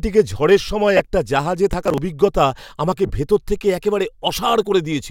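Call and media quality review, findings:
Lost LE Audio frames, 0.97–1.00 s (22.5 ms) and 3.06–3.10 s (37.5 ms): brief noisy smear. LC3 concealment reused the last spectrum with random signs; the gap lengths fit 7.5 ms frames.

Processor overload crackle, 1.73–1.98 s: gritty, hard-edged tearing rather than a smeared dropout. Missed deadlines skipped buffers outright, in what sound like roughly 10 ms steps, until the load eased.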